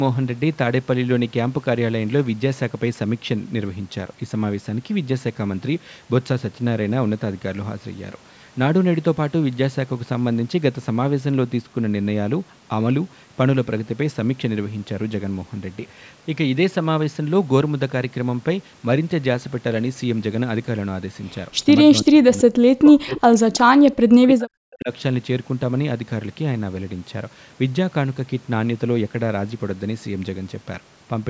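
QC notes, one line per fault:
21.90–23.79 s and 24.09–24.90 s, speech suppressed in double talk: the speech dips by as much as about 40 dB, in pieces lasting about two seconds, then about 0.7 s. This is likely an echo canceller ducking its own talker while the far side spoke. The waveform shows the envelope collapsing in chunks, and the spectrogram shows energy thinning out.
23.17–23.21 s, echo leak: a faint delayed copy of the speech, about 20 dB down, arriving 331 ms after the original. It is likely loudspeaker pickup that the far end's canceller let through. On a spectrogram it appears as a brief, weak repeat of earlier harmonic structure, inside the suppressed stretch.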